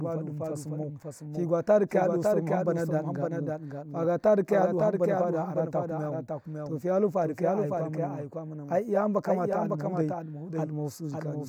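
A slower path or misaligned edit likely mixes everything in twice: a doubled audio track whose copy, about 5 dB quieter, lags half a second.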